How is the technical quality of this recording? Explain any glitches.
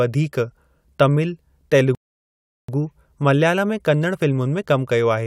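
There's one clear glitch in this speech recording: a rebuffering stall. From 1.95 s to 2.69 s the sound drops to dead silence because the player ran dry of downloaded audio and waited for more. Playback then picks up exactly where it stopped, so nothing's missing, but about 0.74 s of extra gap gets added.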